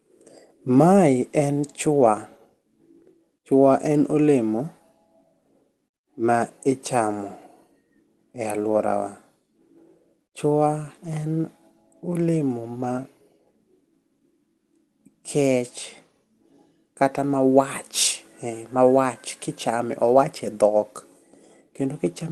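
Speech carried over a call codec path, with no technical faults to report.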